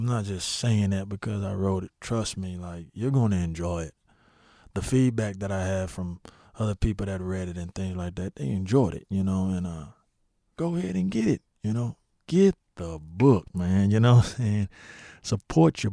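Nothing in the speech stood out as a technical fault on listening.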